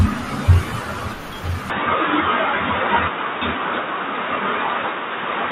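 From the start, the speech carries a watery, swirling quality, with s sounds turning metallic and chirpy and consonant attacks smearing. This is likely MP3 compression, at a rate that fits roughly 64 kbps. With so few bits, the encoder drops the weakest frequency lines and lets them flicker in and out between frames, and it trims the treble. That produces the plainly audible swirl that persists through the whole clip.

At 1.70 s the sound abruptly turns dull and boxy, with nothing above about 3.8 kHz and new background noise roughly 30 dB under the speech. It stays that way to the end. There is no gap at the change and the loudness barely shifts. Both point to the input likely being switched to a poorer device whose narrower band and own noise floor take over mid-recording.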